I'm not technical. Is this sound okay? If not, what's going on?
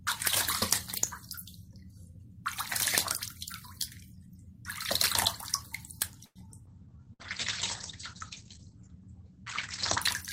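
No, it isn't okay. Between about 6.3 and 10.1 seconds the sound goes through a cluster of call-transmission problems.

At 6.25 seconds there's a call audio freeze. For about a tenth of a second the last bit of sound is stretched into a fading buzz or hiss, trailing into roughly 50 ms of silence, before the audio picks up exactly where it left off. The likely cause is that pieces of the audio got stuck in transit and the phone ran out of sound to play. What sets this apart from the dropouts below is that nothing is lost. The sound is only paused and delayed.

Just after, around 6.66 to 6.69 seconds, comes a skip ahead. The sound jumps forward with almost no gap, and roughly 70 ms of it is simply gone, with the two sides joined nearly directly. Unlike the freeze, there's no held buzz or pause here. It's a quick jump that removes a sliver of the audio.

Starting at the same moment, 6.66 seconds, and lasting until 10.07 seconds, there's a call bitrate drop. 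The connection switched to a much lower-quality mode, so the sound turns muffled and rough. Everything above about 8 kHz is cut away, where before it reached up to about 20 kHz. It stays at its worst for about 3.3 seconds. This is a change in the character of the sound over a long stretch, not a brief interruption.

From 6.89 to 7.09 seconds there's a jitter buffer slow-down. The phone stretched the audio to rebuild its reserve, adding about 50 ms, so that stretch plays at roughly 81% speed. The pitch stays the same, but sounds are drawn out, perhaps with a faint warble. Unlike the freeze, the sound keeps moving throughout, just more slowly.

From 7.13 to 7.22 seconds a burst of packet loss takes out about 60 ms of audio. The gap is covered by roughly 58 ms of the previous sound fading away as a held buzz or hiss, and then the sound resumes further on. This differs from the freeze because material is actually missing afterward. 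It differs from the skip ahead because you hear a fading fill rather than a clean jump.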